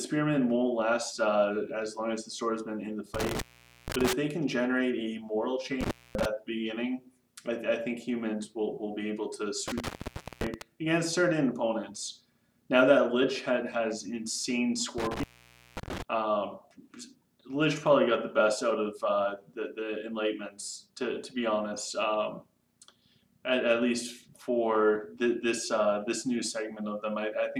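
An intermittent contact fault breaks up the audio four times: at 3.14 to 4.13 s, 5.81 to 6.25 s, 9.68 to 10.62 s and 14.98 to 16.02 s, with the signal dropping out for roughly 470, 240, 530 and 540 ms respectively. A loose plug or cable conductor is briefly losing connection, so each dropout is bracketed by crackle as the contact scrapes open and shut, and faint hiss remains while the line is open.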